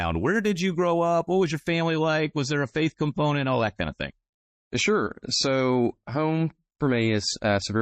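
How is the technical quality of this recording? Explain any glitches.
Quality drops partway through. From 1.68 s, just after "was your", to the end, the adaptive stream switches to a lower bitrate: treble vanishes above 8.3 kHz and codec artefacts thicken, consistent with a fall to roughly 32 kbit/s MP3. The change is abrupt, with no gap.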